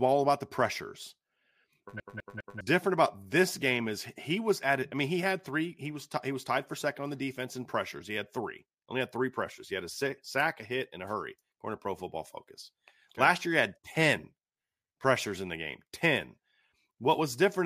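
From 2.0 s to 2.61 s the speech stutters quickly and evenly: a fragment about 0.2 s long plays three times in a row, with a brief mute at each jump, before the audio moves on into "different about this game". This is a CD stuck on one turn: a scratch knocks the laser back one track at the same point on each rotation of the disc, so the same short stretch of audio repeats.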